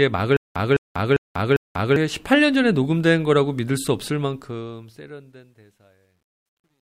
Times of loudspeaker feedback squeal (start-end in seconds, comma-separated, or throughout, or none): none